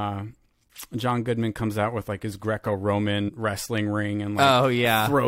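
Speech clip with compressed frames skipped between 3.28 and 3.30 s. Roughly three frames, around 70 ms of audio, never play, consistent with a frame length of about 23 ms. The sound jumps forward at that point.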